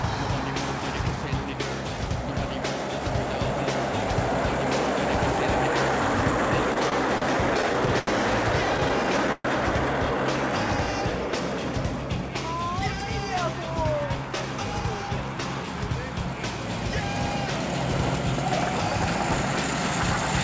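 From 6.74 to 8.09 s and again from 8.77 to 9.46 s, packets arrived too late and the jitter buffer repeatedly ran dry, producing repeated stalls (stutter). The receiver stretched the last sound to fill eight gaps and then six gaps, the longest 82 ms and 124 ms. The audio drags and hiccups without losing content.

Then the buffer overfilled and trimmed pitch periods, a jitter buffer speed-up. From 12.22 to 12.50 s it runs at 110% and from 12.97 to 14.43 s at 107%. The sound hurries at unchanged pitch, shedding about 140 ms overall.

All of this sits on a call path with nothing above 8 kHz, which fits a wideband codec such as G.722.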